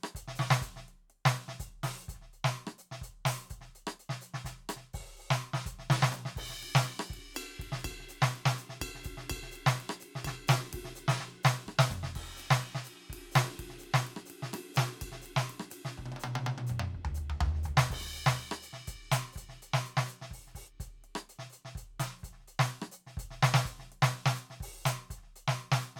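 No audible technical faults detected.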